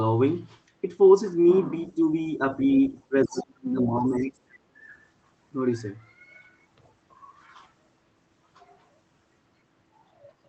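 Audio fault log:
1.96–2.02 and 2.27–2.41 s, speech suppressed in double talk: short dips of around 5 dB in the speech, likely the echo canceller turning everything down while both sides talked at once.
2.89–4.37 s, speech suppressed in double talk: the speech sinks deeply, by roughly 25 dB, for about a second in total, likely the canceller holding the level down through a long stretch of overlapping talk.
2.64–2.91, 3.32–3.44, 3.81–3.86 and 4.22–4.27 s, other side's voice leaking through: scraps of a second voice, around 10 to 25 dB below the speech, likely loudspeaker echo the canceller failed to remove.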